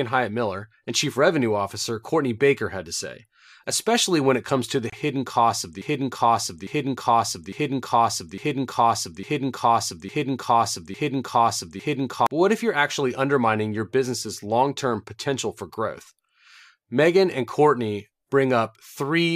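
At 4.90 to 4.93 s, a gap at a join of encoded pieces: a 26 ms silence with smeared edges, where separately encoded segments were joined without trimming the encoder padding. From 5.82 to 12.27 s, a broken-record loop: one 0.85 s fragment repeats back to back eight times, likely a stalled stream resending its last buffer, and the speech it should have carried is lost.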